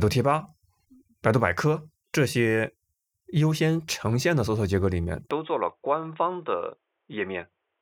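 Input switched to a poorer device at 5.31 s in this speech recording: with no gap, the sound turns dull and boxy, losing everything above 3.8 kHz and dropping slightly in level, likely from capture moving to a narrower-band microphone or headset.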